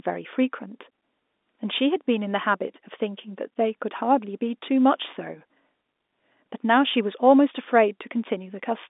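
There are no technical faults to describe in this speech, which comes over an ordinary G.711 telephone line with nothing heard above about 3.8 kHz.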